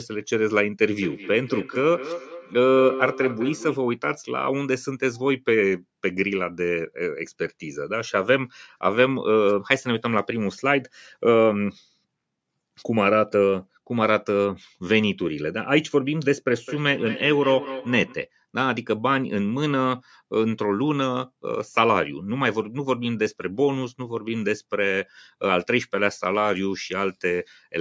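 From 0.93 to 3.85 s, and again from 16.53 to 18.24 s, the speech carries a feedback echo between two devices. A second device in the room replays the call and the first microphone picks it up, beyond its own echo canceller's reach. Repeats return about every fifth of a second, peaking about 10 dB and then about 12 dB below the speech. Unlike single acoustic echo or room reverb, they recur at that fixed spacing, thinner and more ringing each time.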